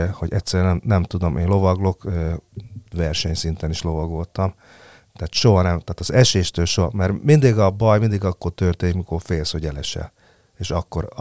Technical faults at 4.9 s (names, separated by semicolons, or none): none